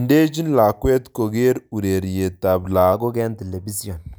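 From 2.93 s to the end, just after "lakwet kokere ureryet tab", the speech has a wrong sample rate. The samples are clocked out faster than they were captured, so the voice runs about 1.09 times quicker and sits roughly 1.47 semitones higher, which fits audio recorded at 44.1 kHz being played at 48 kHz. Unlike a pitch shift or a time stretch, tempo and pitch rise together in fixed proportion.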